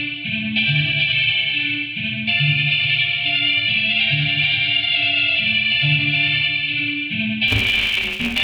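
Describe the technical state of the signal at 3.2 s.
At 3.2 s the signal is intact, with no dropout, clipping, distortion or other fault audible at that point.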